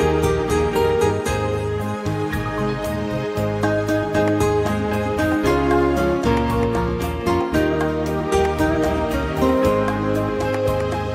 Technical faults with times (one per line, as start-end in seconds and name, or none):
none